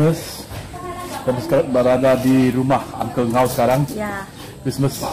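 Hard clipping runs throughout: the signal is driven about 9 dB past what the stage can pass, so around 4% of samples are flattened, heard as crackle on the peaks.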